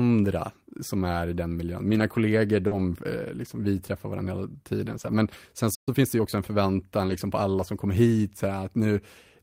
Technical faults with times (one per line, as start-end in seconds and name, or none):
1.87-2.01 lost packet rebuilt from error correction
2.67-2.73 short concealed packet loss
2.71-2.77 lost packet rebuilt from error correction
4.87-5.13 lost packet rebuilt from error correction
5.75-5.89 playback stall
5.89-6.37 time-compressed catch-up
7.06-7.16 lost packet rebuilt from error correction